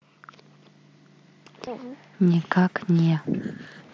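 Concealed Bluetooth headset packet loss: voice packets between the headset and phone were lost at 1.66 s (about 7.5 ms) and 2.99 s (about 15 ms), and the receiver patched each gap with repeated recent waveform, leaving a brief, nearly hidden blip at the first and a brief buzzy tone with a small warble at the second.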